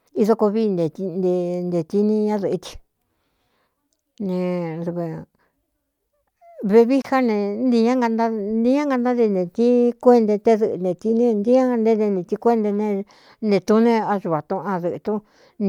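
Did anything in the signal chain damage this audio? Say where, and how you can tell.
Yes, at the codec stage, where separately encoded pieces were joined. At 7.02 s the speech breaks for 25 ms, until 7.04 s, then resumes exactly where it left off. This is a gap at a join of encoded pieces: the encoder's start-up delay and the padding of the final frame were left in at the splice. Unlike a network dropout, no sound is missing, and the abrupt edges are softened by the codec.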